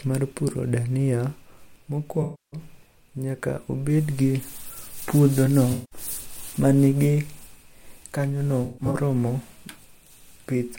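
Smeared, noisy, phasey patches cut into the speech at 2.22–2.60 s, 5.72–6.00 s and 8.64–8.95 s; the last is broken up, its longest gap about 150 ms. This is AAC frame loss with concealment, where the decoder rebuilt missing frames from the previous spectrum.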